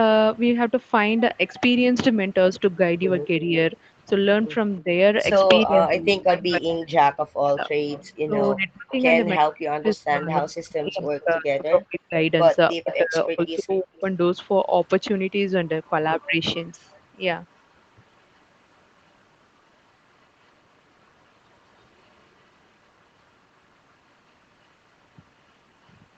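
From 3.41 to 14.0 s a delayed copy of the speech trails the main voice by about 323 ms, sitting roughly 15 dB below it. This is an echo leak, likely from a far-end loudspeaker whose echo canceller let part of the microphone pickup return down the line.

Overlapping that stretch, from 3.52 to 14.05 s, the talker's speech dips and cuts out in pieces, for about five seconds in all, with the deepest drops around 40 dB. This is speech suppressed in double talk: the canceller likely could not separate the talker from the loudspeaker echo while both sides spoke, so it turned both down.

The echo leak returns from 16.21 to 23.93 s at a 328 ms delay, now much quieter at roughly 35 dB below the speech. It appears once more, very briefly, from 25.84 to 25.93 s at 331 ms and about 40 dB down. The band-limited top end, with nothing above 8 kHz, comes from the call's normal microphone processing.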